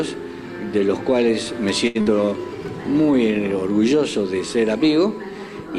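At 1.87 s there is a short stall from a late packet. A packet arrived late and the jitter buffer ran dry. The last sound is stretched for about 76 ms, then continues from the same point. Nothing is lost, but playback now runs 76 ms later.

At 2.01 s a burst of packet loss follows, lasting to 2.08 s. The receiver fills about 52 ms by extending the last sound and fading it. It then skips ahead. About 80 ms of audio is gone, and the delay drops by 28 ms.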